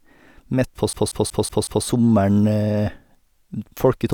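From 0.93 to 1.86 s there is a system hang loop. The system froze while the audio hardware kept replaying its buffer. One 186 ms slice repeats five times at about 5.4 Hz, a machine-gun stutter. This fits an 8192-sample buffer.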